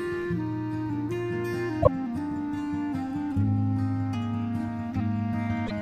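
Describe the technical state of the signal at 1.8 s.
At 1.8 s the music skips forward with a brief garbled stretch from about 1.82 to 1.88 s, roughly two 26.1 ms frames' worth. That's likely a broken MP3 bit reservoir: some frames went missing, and the frames right after the gap reached back for data they'd stored in earlier frames, found bytes from the wrong frame instead, and decoded them as junk until the stream resynced.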